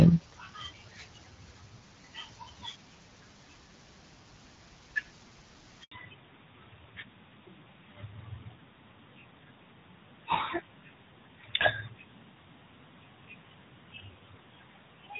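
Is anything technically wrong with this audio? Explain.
Yes, two things go wrong in this speech clip, both around the six-second mark.

Handover gap: from 5.83 to 5.91 s the audio drops out for about 80 ms while the call hops networks and no speech frames arrive.

Fallback to narrowband: from 5.91 s onward nothing above 4 kHz survives. The call likely fell back from HD Voice to narrowband AMR, so the earlier wideband clarity turns dull and boxy.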